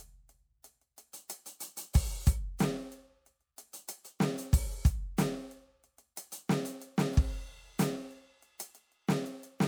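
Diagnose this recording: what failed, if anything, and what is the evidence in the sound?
Nothing failed; this music recording shows no audible fault.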